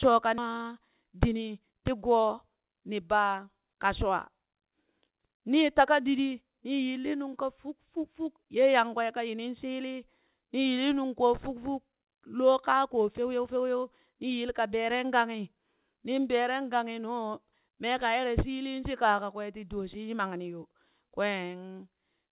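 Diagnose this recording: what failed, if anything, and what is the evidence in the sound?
Skip ahead at 0.38 s: about 0.7 s of speech was dropped, either in transit or by the jitter buffer when it overflowed, so playback jumps forward with no fill.

Then a jitter buffer speed-up from 0.48 to 1.73 s: it trims pitch periods to drain the backlog, running 113% speed at unchanged pitch, about 150 ms removed.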